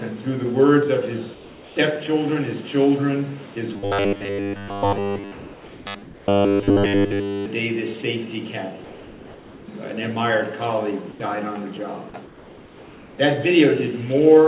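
Comfort noise in place of the background, at 1.34–1.76 s, 5.32–5.86 s, 6.04–6.28 s, 8.84–9.68 s and 12.26–13.18 s: the sender likely stopped transmitting during pauses, so the receiver substituted steady, featureless hiss, mostly about 2 to 3 dB quieter.

Robotic sound from repeated short buffers, 3.74–7.46 s: audio likely arrived too seldom, so 10 ms fragments looped, imposing a rigid 100 Hz metallic buzz throughout.

Sound dropped by the voice detector, at 4.68 s and 11.12–11.20 s: the detector likely misjudged brief sound as background, cutting it to noise for 20 ms and 80 ms. Across the clip, nothing above 4 kHz comes through, which fits a G.711 call codec.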